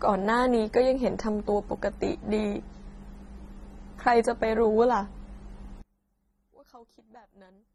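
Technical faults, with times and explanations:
Throughout, AAC compression: the speech is dull and smeared, with nothing above 13.2 kHz and a warbling, fizzy texture on sustained vowels and sibilants. The likely cause is low-bitrate AAC-LC coding, in a range that fits about 24 kbps, starving bands so they are dropped or filled with substitute noise. Unlike a plain low-pass filter, the damage moves with the signal, producing swirling artefacts rather than a clean, static loss of treble.
5.82 to 7.75 s, one channel inverted: from 5.82 s to the end, the level falls by about 29 dB and the centred voice nearly disappears, leaving a faint residue. The likely cause is reversed polarity on one stereo channel, so the shared centre content cancels when the channels are summed to mono. A dropout would leave silence, and a gain change would keep the tone intact.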